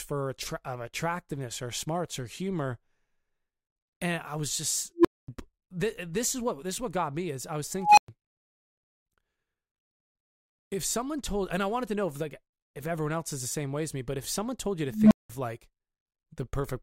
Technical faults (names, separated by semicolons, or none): unstable filter